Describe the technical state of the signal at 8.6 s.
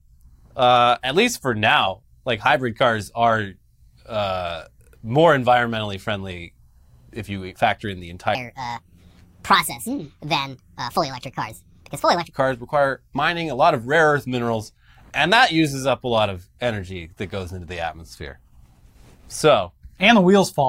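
At 8.6 s you're right inside a section at the wrong speed, running from about 8.35 s to 12.33 s. That stretch plays back 1.46 times faster than it was recorded, most likely because it was fitted to the wrong clock somewhere in editing or playback. Since speed and pitch move together, the speech there comes out rushed and noticeably higher, up by roughly seven semitones, then drops back to normal after 12.33 s.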